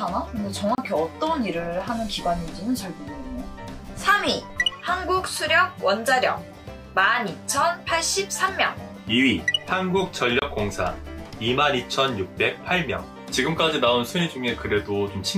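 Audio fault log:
0.75–0.78 s and 10.39–10.42 s: block of digital silence. The audio drops to silence for about 30 ms and 28 ms with no fade, so each gap sounds like a short hole.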